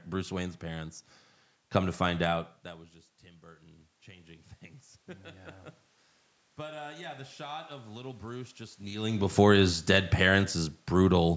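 It's a speech clip where the automatic gain rising shows up twice. From 3.4 to 4.55 s, after the input drops by about 22 dB (the talker seems to lean back around 2.5 s), the gain climbs about 4 dB, so voice and room noise swell together. It happens again from 6.56 to 8.92 s, with another rise of about 4 dB. Then there's automatic gain falling from 9.24 to 11.32 s, where the control backs off about 3 dB after the talker moves around 9 s, and everything sinks together with its background.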